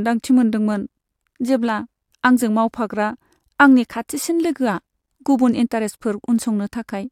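A speech recording, and nothing is technically wrong with it.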